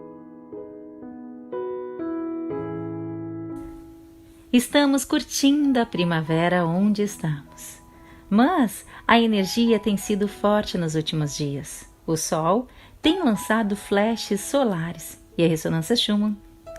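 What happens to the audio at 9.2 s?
Nothing goes wrong at 9.2 s; the audio plays through that moment intact, with no dropout, click, distortion or other fault.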